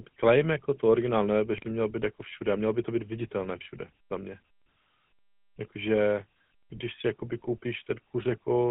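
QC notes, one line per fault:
Throughout, GSM full-rate codec: the whole clip sits in a phone band of about 150 Hz to 3.4 kHz, with an obvious buzzy, gravelly roughness on the speech. That fits the 13 kbps full-rate coder rebuilding the voice from a vocal-tract model driven by regular pulses.
1.56–1.70 s and 3.43–3.47 s, GSM bit errors: short bursts of squawky, gargling breakup where corrupted filter, pitch and gain values reached the decoder and bent the spectrum for a few frames. The first burst runs longer, and the second is only a brief blip.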